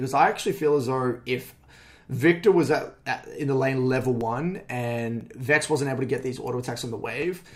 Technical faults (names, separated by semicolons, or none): periodic USB or driver dropouts